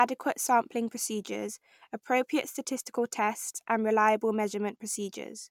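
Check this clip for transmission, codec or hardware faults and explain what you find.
No transmission, codec or hardware faults can be heard anywhere in the speech recording.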